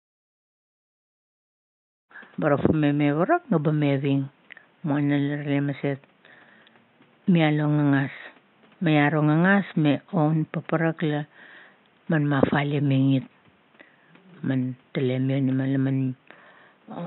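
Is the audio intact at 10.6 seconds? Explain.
Yes, the speech at 10.6 seconds is intact, with no audible fault at that moment.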